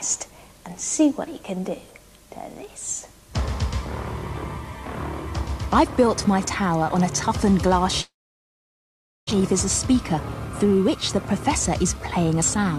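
A long network dropout, likely, runs from 8.01 to 9.33 s: audio stopped arriving, so the receiver stretched out the last sound as a brief fading buzz before going almost silent, and about a second of audio never plays before the sound resumes.

A jitter buffer speed-up follows twice, from 9.41 to 10.15 s and from 10.64 to 12.78 s. Audio piled up in the buffer after the gap, so the receiver trimmed tiny pitch-period slices to catch up, roughly 50 ms and then 100 ms in all. The sound runs about 5% fast at unchanged pitch, slightly hurried.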